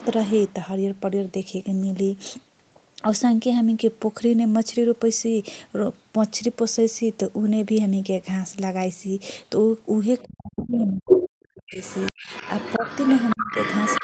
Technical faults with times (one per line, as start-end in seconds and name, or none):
0.00-0.52 other side's voice leaking through
10.19-14.04 other side's voice leaking through
10.23-14.04 speech suppressed in double talk